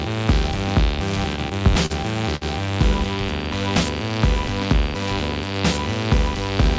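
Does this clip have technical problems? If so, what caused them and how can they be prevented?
Yes. From 1.36 to 1.92 s there are repeated stalls (stutter). The sound catches five times in about half a second. Packets were arriving late or slower than playback, so the jitter buffer kept running dry. Each time, the receiver held the last sound going until data arrived. The longest hold is about 39 ms, and roughly 80 ms is filled in all. Nothing is lost, but the audio drags and judders. A larger or faster-adapting jitter buffer, plus a steadier network path, would prevent this.

At 2.36 to 2.43 s there is a short stall from a late packet. One packet missed its slot because the network delay jumped by about 54 ms. The jitter buffer emptied, and the receiver stretched the last sound for about 54 ms. Playback then resumed where it left off, so nothing is missing. The held sound has a slight buzz or dip. 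Giving the jitter buffer more headroom for sudden delay jumps would prevent it.

Both stalls come through a call path whose band stops at 8 kHz, which points to G.722 at 64 kbps.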